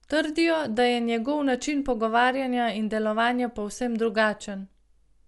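From start to finish the speech is dull, with nothing above 11.4 kHz, and a rough, fluttering noise clings to tonal parts, which fits a bitrate near 64 kbps and likely Dolby Digital compression. Unlike plain low-pass filtering, unfunded frequency lines get refilled with dither noise.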